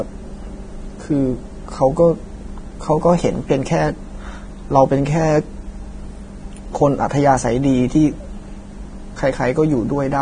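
From start to finish the speech sounds hissy and grainy, with nothing at all above 9.7 kHz and a rough, smeared quality on consonant onsets. That's most likely heavy Vorbis compression: the encoder has dropped its cut-off and quantised the upper band so coarsely that real detail turns into noise of similar energy. The damage is heavy, which fits a low bitrate somewhere in the low twenties of kbps.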